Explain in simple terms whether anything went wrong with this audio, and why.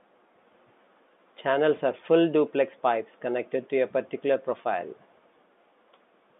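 Listening to this speech recording, nothing stood out as having gone wrong.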